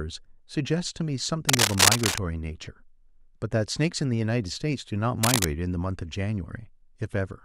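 From 1.49 to 2.19 s, and again from 5.23 to 5.45 s, a burst of cable scratch noise rides over the speech, rising a little above it. Each burst is dense, uneven scratching and rustling, most likely from a worn cable or connector being moved so that its contact resistance jumps about. Unlike the isolated, evenly spaced ticks of vinyl crackle or a dropout's silent gap, the noise comes in ragged clusters while the speech continues underneath.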